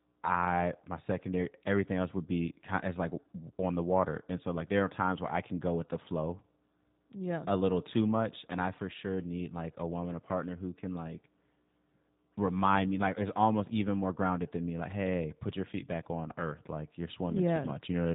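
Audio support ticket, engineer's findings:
G.729 codec damage throughout the speech. Rough, slightly synthetic texture, clearly audible. Spectrogram: hard ceiling at 4 kHz, nothing above. Cause: low-rate CELP coding that rebuilds each frame from a vocal tract filter, pitch predictor and sparse pulses, which fits an 8 kbit/s G.729A path. Likely component: VoIP trunk or gateway transcode.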